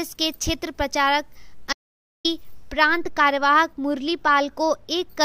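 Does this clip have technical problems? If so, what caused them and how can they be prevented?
Yes. From 1.73 to 2.25 s there is an audio dropout to silence. The sound cuts out completely for about 0.52 s, with no background left in the gap. The likely cause is a lost input, such as a loose connection or a brief mute, while recording continued. Monitoring the input live and securing cables and mute controls prevents this.

From 2.73 to 5.21 s, de-emphasis was applied wrongly. A treble cut was added where none was needed, so the response slopes down to about 8 dB lower at 10 kHz than at 1 kHz. The sound turns dull and muffled. Checking that de-emphasis is used only on pre-emphasised sources, and only once, prevents this.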